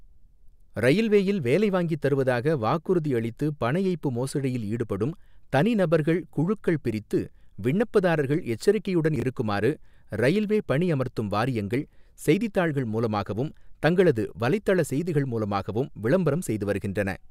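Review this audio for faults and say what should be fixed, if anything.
At 9.16 to 9.22 s the speech has chunks out of order: a 20 ms chunk plays two chunks late, after the two that should follow it. The result is a brief jumbled stutter. On a waveform, three abrupt discontinuities appear; on a spectrogram, thin vertical broadband lines mark each join. Fix this by having the playback or capture buffer reorder chunks by sequence number or timestamp before writing them out.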